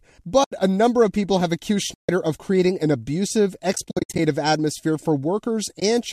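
Dropouts from AAC frame loss with muting occur at 0.44–0.52 s, 1.94–2.09 s, 3.73–4.19 s (a scattered cluster of short gaps, the longest roughly 70 ms) and 5.80–5.82 s. The decoder zeroed the lost frames, so each dropout is a soft-edged silent hole. It shows as a blank vertical band on the spectrogram and as a flat, taper-edged gap in the waveform. The gap lengths fit 10 ms frames, likely from low-delay AAC-ELD at about 64 kbps.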